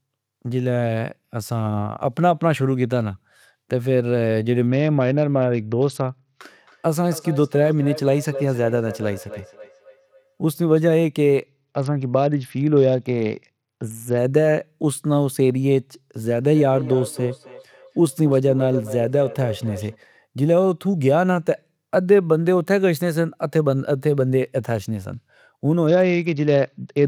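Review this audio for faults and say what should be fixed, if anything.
Speech turns dull and gritty from 4.67 to 6.39 s, from 11.46 to 14.18 s, and again from 25.87 s to the end. This is a Bluetooth SBC bit pool drop. On a congested link the encoder gave the upper sub-bands almost no bits, which fits a bit pool falling from 28 to 8, around 72 kbps.

Speech comes back around every third of a second, thinner each pass, from 6.67 to 10.83 s and from 16.16 to 19.99 s. The repeats peak at about 15 dB and then about 12 dB below the speech. This is feedback echo between two devices: one device replays what the other's microphone sent, and that microphone picks it up again.

To prevent both, keep the Bluetooth link uncongested and join the call from only one device in the room, or mute the second device's speaker.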